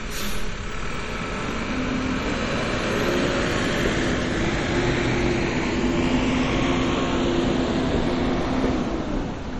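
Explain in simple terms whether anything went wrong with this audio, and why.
Something did go wrong, and it runs through the whole clip: the audio carries plainly audible MP3 compression damage, likely from being saved as a low-quality MP3. Nothing is left above about 16.7 kHz, so the top end sounds dull and clipped off. Quieter details flicker in and out from moment to moment, giving a watery, swirly texture, and sharp attacks come across smeared rather than crisp, because the encoder ran short of data and discarded detail.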